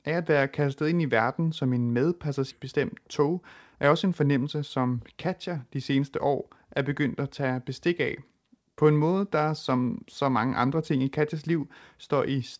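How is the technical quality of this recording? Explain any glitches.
The speech carries two timing glitches close together, both from the receiving end of a call path whose top end stops at 8 kHz, which points to a wideband codec such as G.722.

At 2.51 s there is a skip ahead: the speech jumps forward abruptly, with around half a second of audio simply gone and the two sides joined with no gap or fill. This happens when a late stretch is discarded, in transit or by an overfull jitter buffer, because later audio is already queued, so playback resumes from the newer material and the delay drops by about the same half second.

From 2.59 s to 5.57 s comes a jitter buffer speed-up: the speech runs about 8% fast, sounding slightly hurried while the pitch stays unchanged. After the backlog built up, the receiver trimmed the excess by repeatedly cutting out tiny slices a pitch period or so long, removing roughly 300 ms in total across those three seconds until the buffer returned to its target depth.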